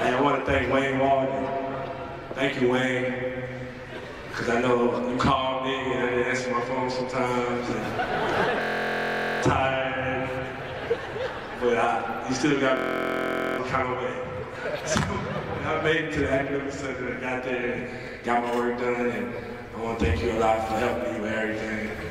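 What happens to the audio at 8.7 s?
At 8.7 s the sound is caught in a system hang loop, running from 8.62 to 9.43 s. The machine stalled while the playback hardware kept replaying its ring buffer, so one 23.2 ms slice repeats exactly, 35 times. That fits a 1024-sample buffer. The result is a steady buzz at 43.1 Hz in place of about 0.7 s of audio. Unlike a dropout, nothing falls silent. Unlike a codec warble, every cycle is identical.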